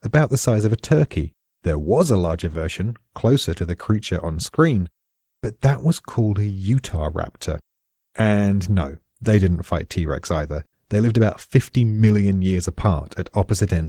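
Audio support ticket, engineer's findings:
Opus voice compression, whole clip: speech muffled, hoarse, faintly robotic. Spectrogram: detail reaches about 20 kHz, but above 8 kHz it is thin and patchy from a coarse CELT layer over SILK. Blocky texture fits 20 ms frames and roughly 16 kbps.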